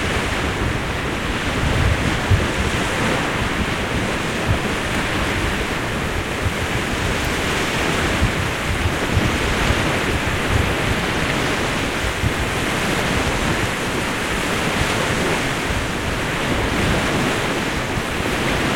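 From 11.79 to 13.70 s, a train of clicks: around twenty same-shaped pops, unevenly spaced near 10.5 per second and about 10 dB above the sound. The shape is repetitive, not random crackle, and likely comes from interference or a faulty connection or power supply.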